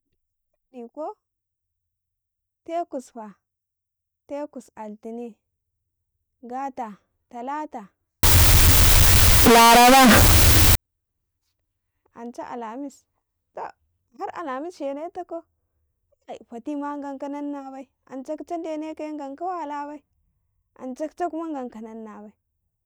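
At 8.23 s, just after "gata talata", the speech turns suddenly very loud and harsh. It stays that way until 10.75 s. The waveform sits at an almost fixed, high level and looks almost square. Background noise rises to the same level as the speech, though pitch can still be followed. The likely cause is float read as integer. The sound points to 32-bit float samples being read as 32-bit integers, so sign and exponent bits set the level.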